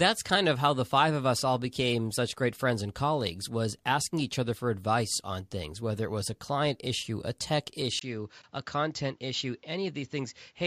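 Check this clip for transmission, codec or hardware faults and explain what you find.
From 7.99 s to the end, right after "client issue a tech", the speech turns duller and boxier, with nothing above 7.6 kHz, a slightly lower level and a faint new background noise, after a 20 ms gap. This likely points to an input switched to a poorer device.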